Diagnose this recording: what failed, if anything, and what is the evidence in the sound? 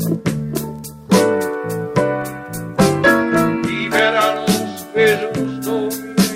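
Call bitrate drop from 2.22 to 4.11 s, in the network and codec stage: the sound turns coarse and muffled, with treble cut away, which fits the encoder falling from around 96 kbps to about 28 kbps after the bandwidth estimate dropped, then recovering.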